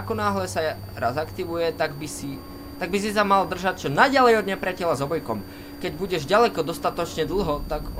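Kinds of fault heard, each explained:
Switching supply whistle: a switch-mode power supply running in an audible burst mode, or beating against another supply, leaks a high whistle into the audio. Here it persists throughout, wandering between about 4.54 and 4.78 kHz, roughly 30 dB below the main signal.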